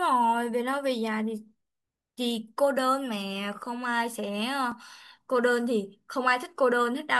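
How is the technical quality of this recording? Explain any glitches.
One glitch stands out. At 4.72 s a repeated buffer plays: a tiny 1.33 ms piece, which fits a 64-sample buffer, sounds twice when fresh audio arrives late, making a brief click rather than the silent gap a dropout leaves.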